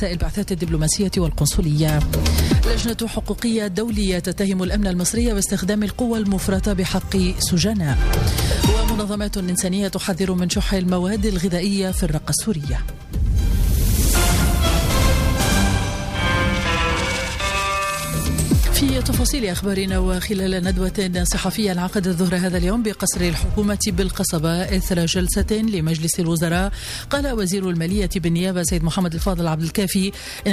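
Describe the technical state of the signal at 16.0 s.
At 16.0 s the signal carries a doubled audio track, running from 14.98 to 17.98 s: a second, full-band copy trails the original by about a tenth of a second at roughly equal loudness, likely from a slower second capture path. It sounds like a dry slapback with no decay or room colour, cutting in and out abruptly. A waveform shows every transient repeated once; a spectrogram shows each onset echoed as an identical ghost shifted right.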